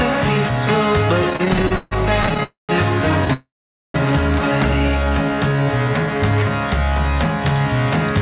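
From 1.3 to 2.43 s the sound keeps catching and dragging, with seventeen brief hitches in which the last fragment is stretched out, the longest about 148 ms. These are repeated stalls (stutter): packets kept arriving late, so the jitter buffer ran dry again and again, and the receiver extended what it last had each time. About 351 ms was filled this way, roughly a third of that span, with nothing actually lost.

Straight after, at 2.43 s, the audio hangs on a fading continuation and then goes quiet for about 150 ms before resuming at 2.71 s. A longer hang runs from 3.33 to 3.96 s, with about 480 ms of near-silence inside it. Both are call audio freezes, likely caused by packets held up in transit emptying the jitter buffer. The receiver bridged the waits, about 256 ms and 610 ms, then carried on where it stopped, so gaps were inserted rather than anything dropped.

From 4.99 to 5.65 s the sound runs slower at unchanged pitch, drawn out, at about 87% speed. 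This is a jitter buffer slow-down: to rebuild its reserve, the buffer repeated single pitch periods or bits of pauses many times over, adding about 100 ms. Throughout, the band stops at 4 kHz, which fits G.711 mu-law on the call path.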